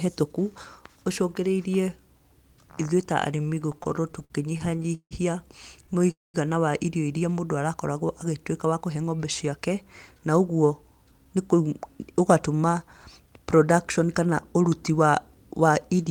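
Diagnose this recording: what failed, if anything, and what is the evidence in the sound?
Repeated stalls (stutter) at the network and jitter-buffer stage: from 3.37 to 5.13 s the speech halts in 24 short gaps, the longest 161 ms, filling about a quarter of that span, then four tiny gaps, none over 11 ms, from 5.87 to 6.09 s. Late packets left the buffer empty, so the receiver stretched the last sound each time. On a spectrogram this shows as smeared, repeated harmonic slices between normal speech.

A call audio freeze follows at 6.11 to 6.36 s: a 231 ms hold where the last sound is extended briefly and then about 190 ms is silent before speech resumes where it stopped. The likely cause is held-up packets draining the jitter buffer. The waveform shows a flat gap.

Jitter buffer speed-up from 8.65 to 11.61 s: the speech runs at about 109% speed with unchanged pitch, sounding hurried. The buffer held more audio than it aims for, so the receiver trimmed pitch-period-sized pieces, about 0.3 s in total. 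On a spectrogram, syllables look compressed in time.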